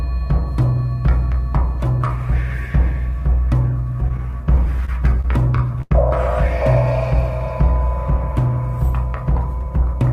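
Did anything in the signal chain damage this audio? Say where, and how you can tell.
Yes, at the network stage: repeated stalls (stutter) between 4.08 and 5.92 s, eleven brief hitches up to 90 ms each. Packets arrived late, so the jitter buffer kept emptying and the receiver stretched the last sound. Unlike packet loss, nothing is missing; the audio just drags.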